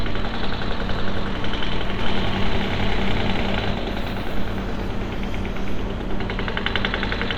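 A doubled audio track runs from 2.01 to 3.71 s: a second full-band copy, roughly as loud, trails by about 0.4 s and cuts in and out abruptly, likely from a delayed second capture path.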